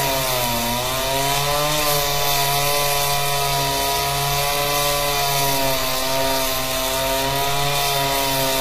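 From start to finish the treble has a grainy, metallic sheen that doesn't match the body of the sound, and the damage is plainly audible. This is likely HE-AAC compression at a low bitrate, which fits roughly 24 kbps, with the upper band rebuilt from copied lower bands rather than coded. On a spectrogram the top shows smeared, repeated-looking patterns that don't line up with the harmonics below, and everything stops at 15.5 kHz.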